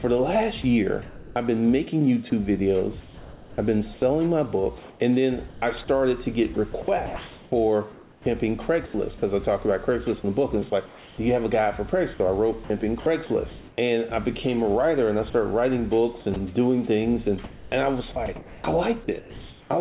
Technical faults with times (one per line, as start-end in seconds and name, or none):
0.62-1.36 sound chopped by the voice detector
3.00-13.78 sound chopped by the voice detector
15.30-19.70 sound chopped by the voice detector